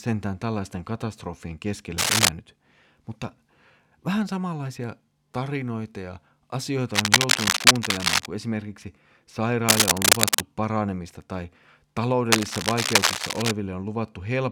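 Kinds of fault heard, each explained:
Cable scratch noise: dense, uneven bursts of rasping noise sit over the speech four times, from 1.98 to 2.29 s just after "tällaisten katastrofien", 6.94 to 8.26 s, 9.69 to 10.41 s just before "paranemista tai", and 12.32 to 13.51 s, each about 5 dB above the speech. The likely cause is a worn cable or connector whose contact resistance flickers as it moves. A spectrogram shows ragged broadband smears over the speech, and the waveform shows jagged, irregular spikes.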